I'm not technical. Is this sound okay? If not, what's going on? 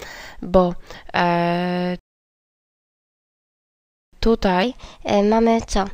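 No. At 1.99 seconds the sound drops to silence and picks up again at 4.13 seconds exactly where it stopped. That is a rebuffering stall: the player ran out of downloaded audio and waited for more, adding about two seconds.

From 4.63 seconds to the end, the sound turns quicker and higher, roughly two semitones up. That is a section at the wrong speed, playing 1.15 times too fast, likely because that stretch was played back against the wrong clock.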